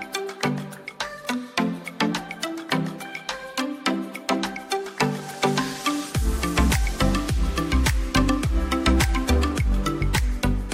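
From 6.86 s to 9.07 s, mains hum appears: a ground loop or nearby transformer leaks the 50 Hz power line into the signal, about 30 dB below it. Unlike wandering low-frequency rumble, it holds one fixed, steady pitch with some low harmonics.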